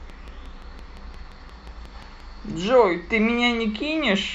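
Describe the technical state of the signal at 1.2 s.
At 1.2 s a steady ticking sits over the speech, part of a train of clicks running from 0.10 to 2.21 s at a regular 5.7 per second, around fifteen pulses roughly as loud as the voice. Likely cause: interference or a struggling interface injecting repeated pulses.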